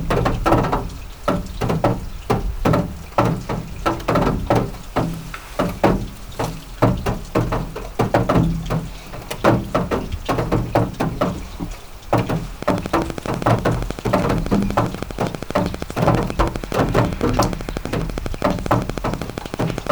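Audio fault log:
12.63–19.88 s, train of clicks: about a hundred regularly spaced clicks at 12.4 per second, well above the sound, likely interference from nearby equipment injecting pulses of much the same shape.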